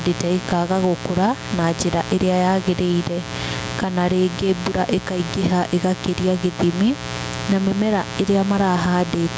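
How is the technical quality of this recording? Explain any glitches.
The recording has two faults that run through the whole clip, both affecting the speech.

A steady, raspy mains buzz sits roughly 15 dB below the speech. Switching spikes at twice the 60 Hz mains rate, most probably from a dimmer, rectifier or poor shielding, spread harmonics up into the kilohertz range.

The level swings by about 10 dB and the speech sounds squashed. This is likely gain pumping, where the input gain is set too high and a fast limiter clamps down on each peak.

The room noise is part of the recording itself. Nothing above 8 kHz comes through the call's microphone processing.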